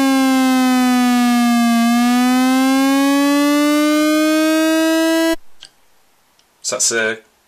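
At 6.68 s the sound runs into hard clipping that lasts until 7.11 s. For this stretch the signal is driven about 8 dB past the ceiling of a stage in the chain, so every peak that crosses the limit is sliced off flat. Those squared-off tops generate harmonics well above the original content.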